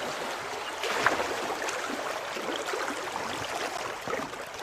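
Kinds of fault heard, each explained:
gap between stream segments: a hard-edged silent hole of about 10 ms at 3.78 s, where two 1 s segments fail to meet; it shows as a flat dropout in the waveform and a thin blank vertical stripe on the spectrogram.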